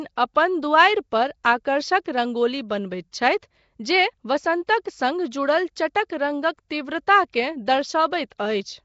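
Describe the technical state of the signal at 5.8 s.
At 5.8 s the speech carries a rough, hissy halo and a smeared, underwater quality. This runs through the whole clip, not just this moment. Nothing is present above about 7.7 kHz. The likely cause is Nellymoser compression, the old Flash microphone codec. It codes short blocks with very few bits per sample. Weak bands get no bits and are filled with noise instead. The damage is plainly audible, and it fits a rate of around 32 kbps.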